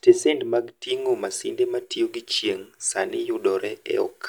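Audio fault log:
No faults found in this speech clip.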